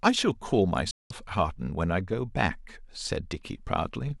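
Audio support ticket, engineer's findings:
Digital broadcast dropout, 0.91 to 1.11 s: speech cuts to silence through a 3 ms fade and resumes after about 0.19 s, with that content lost. The receiver muted on failed or missing frames; the gap fits roughly six frames. Waveform: flat near-silent line. Spectrogram: blank full-band column, sharp edges.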